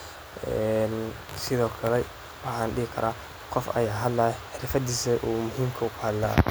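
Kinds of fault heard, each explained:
No faults detected on this speech clip.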